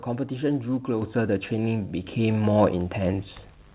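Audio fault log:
1.02 s, microphone volume stepped up: the input gain rises about 5 dB in one step, lifting speech and background together. The waveform envelope widens abruptly there, and the spectrogram brightens evenly across the band, which ends at 4 kHz on this narrowband call path.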